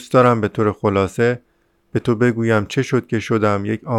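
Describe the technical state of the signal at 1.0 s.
At 1.0 s the signal is intact, with no dropout, clipping, distortion or other audible fault in the speech at that moment.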